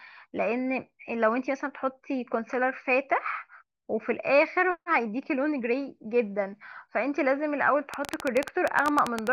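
A speech recording with a train of clicks running from 7.94 s to 9.28 s, close to the end. The clicks arrive at about 12 per second with uneven spacing, around fifteen in all, each with much the same sharp shape and peaking about 15 dB above the speech. They stay audible between syllables as a ragged ticking. The likely cause is interference from nearby equipment or a faulty connection or power supply.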